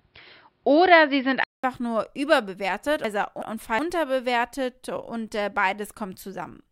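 A speech recording opens narrowband and dull. From 0 to 1.64 s nothing reaches above 5.4 kHz, and the level sits about 5 dB apart from what follows. A faint, different noise floor lies well below the speech. A 200 ms silence marks the change. The likely cause is an input switched to a poorer device. From 3.04 to 3.79 s, frames arrive out of order. Two neighbouring blocks of 371.5 ms play with their halves exchanged, which fits runs of four frames each. The stretch sounds like a garbled flutter. No time is lost.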